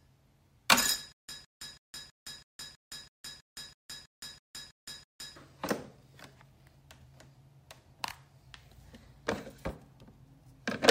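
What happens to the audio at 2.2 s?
At 2.2 s the audio is caught in a stutter with silent gaps, running from 1.12 to 5.36 s. A fragment about 161 ms long plays, then about 165 ms of dead digital silence follows, and the cycle repeats every 326 ms, 13 times in all. The likely cause is a stalled player or stream that replays its last fragment at each retry and then runs dry. The sound that belonged in that span is lost.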